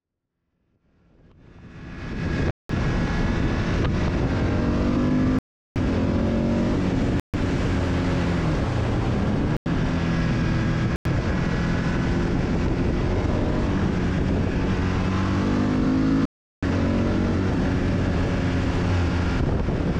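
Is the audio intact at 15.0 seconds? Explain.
Yes, the audio at 15.0 seconds is intact, with no fault present at that moment.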